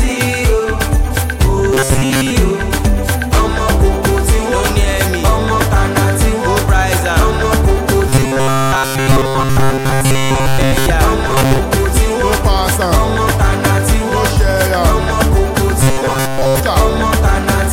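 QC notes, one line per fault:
1.73–2.31 s, 8.09–10.86 s, 11.28–11.59 s, 15.81–16.60 s: robotic sound from repeated short buffers. The sound becomes a rigid metallic buzz at 134 Hz that loosely tracks the underlying audio, likely because data arrived too late and a slice of about 7.5 ms was looped while most of the real signal was skipped. A spectrogram shows evenly spaced harmonics locked to 134 Hz, and the waveform shows a visibly repeating short cycle.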